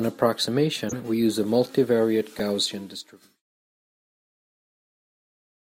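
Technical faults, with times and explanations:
0.89–0.94 s and 2.39 s, corrupt frame decoded: two short glitches where damaged compressed frames got played anyway, so energy lands at the wrong frequencies. The first peaks around -15 dBFS and sounds like a couple of frames' worth. The second, louder at about -10 dBFS, falls during the smooth fade-out that runs from roughly 2 s to 3.44 s.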